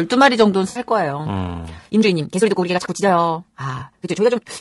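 Throughout, the speech sounds rough and grainy, with noise between harmonics and a thin top band, plainly audible low-delay AAC compression, likely AAC-ELD at a rate that fits about 32 kbps. From 0.69 to 0.79 s, and again at 3.79 to 3.83 s, AAC frame loss with concealment leaves smeared, noisy, phasey patches where the decoder filled gaps of about 60 ms and 20 ms from earlier spectrum. From 1.63 s to the end, a time-stretched section runs about 1.94 times faster with unchanged pitch, sounding rushed, likely from software squeezing the audio by dropping short pieces.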